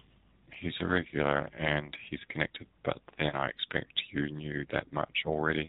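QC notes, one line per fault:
throughout, AMR narrowband mobile codec: the speech passes through the AMR-NB mobile codec at 7.4 kbps, and the damage is plainly audible. Sampling at 8 kHz removes everything above 4 kHz, so sibilants lose their edge and the sound turns boxy. At this low rate the vocal tract model is driven by only a sparse set of pulses in each subframe, which gives voiced sounds a buzzy, synthetic quality.
3.30 to 3.36 s, lost AMR speech frame: a single 20 ms frame was lost, most likely because radio errors made it fail its checksum. The decoder stood in for it by repeating the last good pitch and vocal tract settings at reduced gain. Because only one frame is missing, the concealment is heard as a brief dip or warble, not a drawn-out fade, and the speech is rough for a moment as it resumes.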